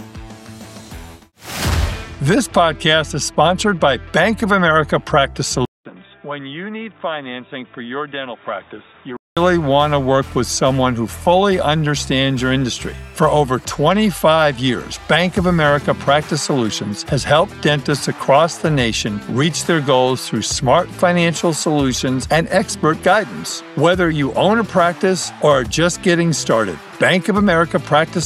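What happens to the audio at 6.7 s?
At 6.7 s the sound is dull and boxy, with nothing above 3.8 kHz, roughly 10 dB quieter and carrying its own faint background noise, from 5.65 to 9.37 s after a 200 ms silence. The likely cause is the input switched to a poorer device.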